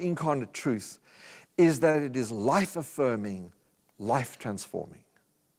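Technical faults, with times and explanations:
1.91–1.97 s, short stall from a late packet: just after "truth is" and before "it is life affirming", the sound hangs briefly instead of moving on. A packet missed its playout deadline and the jitter buffer ran dry, so the receiver stretched the last audio for about 26 ms until the data arrived, then resumed from the same point. Nothing is lost, but playback now runs about 26 ms later, and the held segment carries a faint buzz or dip.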